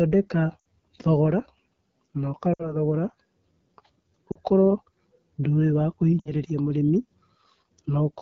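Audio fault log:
Throughout: AMR wideband (HD Voice) codec. The speech sounds rough and raspy. It is coded at 8.85 kbit/s, one of the lowest wideband rates. At that rate the pulse-driven vocal tract model is coarse. The band above 6.4 kHz is only shaped noise.
0.59, 2.53 to 2.76, 4.31 to 4.39, 6.20 to 6.31: lost AMR speech frames. Each event drops to near silence within two frames. The decoder repeated the last good pitch and vocal tract settings at falling gain. Each gap fits two or three lost 20 ms frames. Afterwards the voice returns briefly weak.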